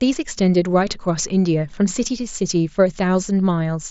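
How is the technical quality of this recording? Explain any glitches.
The speech carries one brief glitch, a near-invisible hiccup at 3.15 s, over a wideband Bluetooth headset path with the light graininess of mSBC coding. That hiccup is concealed Bluetooth headset packet loss: about 7.5 ms of audio went missing, consistent with a single lost frame, and the receiver patched the gap with a closely matching stretch of preceding waveform.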